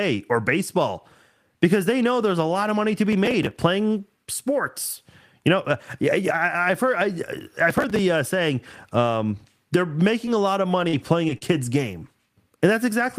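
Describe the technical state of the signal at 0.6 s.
At 0.6 s the speech signal is intact, with no audible fault at that moment.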